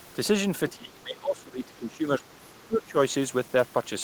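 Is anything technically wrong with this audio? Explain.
Yes, two faults overlap near the start of this speech clip.

Other side's voice leaking through, from 0.69 to 0.76 s: a faint second voice, roughly 20 dB below the talker, slips in briefly. This is likely loudspeaker playback of the far end that the echo canceller failed to remove from the microphone.

Speech suppressed in double talk, from 0.74 to 2.97 s: the talker's level sinks, at its deepest by around 20 dB, over about two seconds. Both sides were likely speaking at once, and the echo canceller, unable to separate them, turned everything down.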